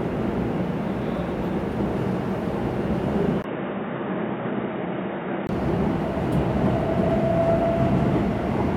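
At 3.42 s the sound cuts out for 20 ms. It returns dull and boxy, with nothing above 3.8 kHz. It is a few decibels quieter and carries faint new background noise. At 5.49 s it clears again. The input likely switched to a poorer device.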